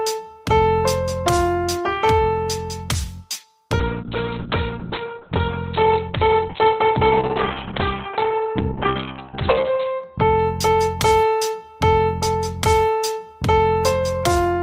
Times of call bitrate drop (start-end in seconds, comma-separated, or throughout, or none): 3.80-10.71